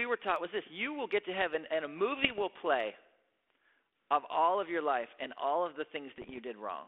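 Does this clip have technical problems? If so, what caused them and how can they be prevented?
Yes. Bit errors on an ADPCM link cause pops and rough bursts at 2.23–2.40 s and 6.17–6.40 s. Each flipped bit upsets the adaptive decoder, so the damage rings on. Error protection or a stronger radio link would prevent it.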